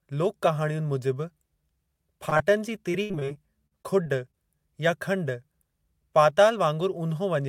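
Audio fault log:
2.29–2.33 s and 2.37–2.41 s, short concealed packet loss: about 20 ms missing each time, patched by extending the preceding sound, heard as brief smears.
2.91–4.35 s, repeated packet loss (robotic sound): ten gaps, longest 62 ms, about 16% of the span synthesised, so the sound turns choppy with pieces missing.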